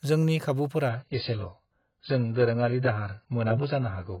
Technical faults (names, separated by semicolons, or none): adaptive stream at a lower bitrate